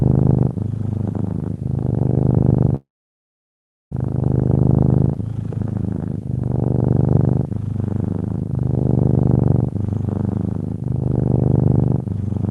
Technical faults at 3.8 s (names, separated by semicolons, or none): long network dropout